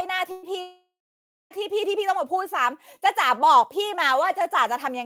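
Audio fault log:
0.31 to 0.46 s, burst of packet loss: Early on the sound hiccups. About 120 ms of audio never made it, and the receiver papered over roughly 113 ms of that by stretching out whatever it last had and letting it die away. So you hear a brief smeared buzz or hiss fading down, then things pick up a little further along with that slice simply gone.
0.61 to 1.53 s, long network dropout: This one is much bigger. Nearly 0.9 s goes missing, most likely because nothing was arriving over the network for that stretch. The receiver keeps repeating the last bit of sound as a fading buzz or hiss for a short while, then gives up, leaving about 620 ms of flat silence before the audio jumps back in with that whole chunk lost.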